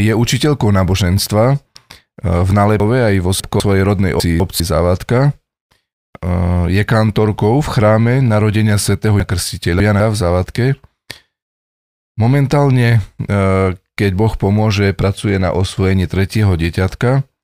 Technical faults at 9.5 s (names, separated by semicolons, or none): chunks out of order